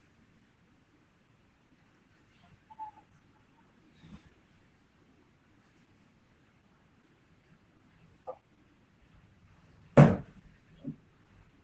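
From start to finish the speech carries Opus voice compression, and the damage is plainly audible. Nothing reaches above about 8.7 kHz, so sibilants and breath lose their top and the voice sounds dull and boxed in. The codec is running its SILK linear-prediction coder in wideband, modelling the voice and coding its excitation coarsely, which leaves a hoarse, faintly robotic grain. The sound points to a low bitrate, around 12 kbps.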